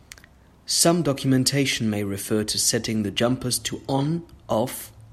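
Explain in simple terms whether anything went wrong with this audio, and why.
Nothing went wrong here.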